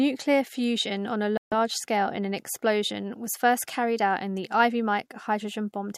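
At 1.37 s, a Bluetooth stall likely occurred: interference held back packets, the headphones' buffer ran empty and playback paused until resent data arrived. The speech cuts to silence for 143 ms after "fusion on a", then resumes at 1.53 s with "scale in an explosion".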